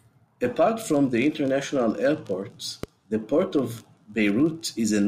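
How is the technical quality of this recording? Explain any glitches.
One glitch stands out: a loud pop at 2.83–2.86 s, a single sharp burst about 10 dB above the speech, likely from a voltage spike. Unlike a dropout, the speech continues underneath it.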